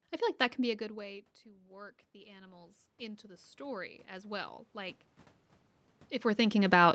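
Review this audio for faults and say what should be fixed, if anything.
The automatic gain control reacted to a drop of about 23 dB in input level just after the talker moved away from the microphone at around half a second, and it raised its gain by about 16 dB between 0.77 and 5.04 s. The voice and the room noise therefore swell together over those four seconds. To prevent it, slow the gain control's attack and cap its maximum boost so that brief distance changes don't pump the level.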